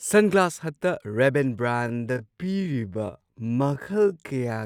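From 1.66 s to the end, a time-stretched section slows the speech to about 0.54 times its pace without changing pitch, likely from repeating short pieces; it drags, and a spectrogram shows harmonics drawn out longer.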